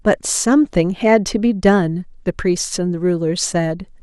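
Dull, gurgling speech with a granular edge runs through the whole clip, as upper sub-bands switch off and flicker while the remaining ones are coarsely quantised. This is likely MP2 compression, plainly audible and consistent with a rate of around 80 kbps. From 3.67 to 3.82 s a burst of DAB burbling sits over the speech. Bit errors at a rate well under one percent have slipped past the error correction and put short blips of noise into individual sub-bands, damage that points to about six frames.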